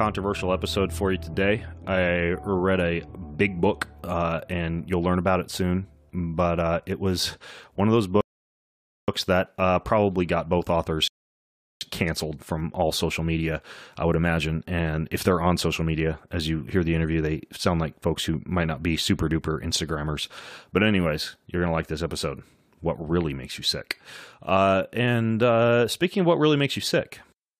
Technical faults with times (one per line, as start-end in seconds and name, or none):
8.21-9.08 rebuffering stall
11.08-11.81 rebuffering stall